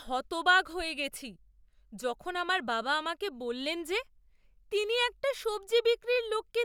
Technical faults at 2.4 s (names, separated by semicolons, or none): none